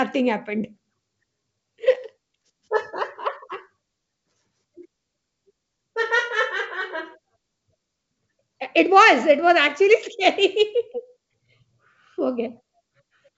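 Nothing stood out on listening to this speech, which comes over the call path with no content above 8 kHz.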